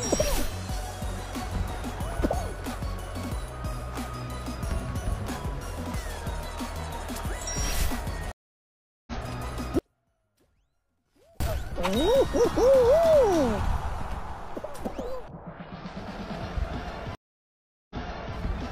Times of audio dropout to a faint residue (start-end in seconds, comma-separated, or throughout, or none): 9.79-11.40